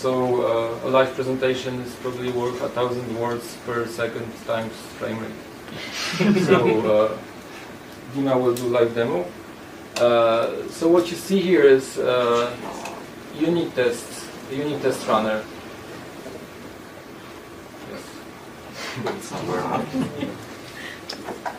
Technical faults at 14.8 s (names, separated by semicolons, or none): none